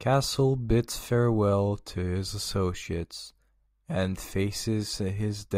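Nothing is technically wrong with this speech recording.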